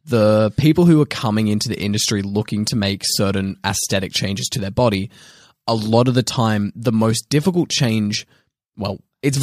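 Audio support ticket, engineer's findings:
Listened through the speech recording and nothing stood out.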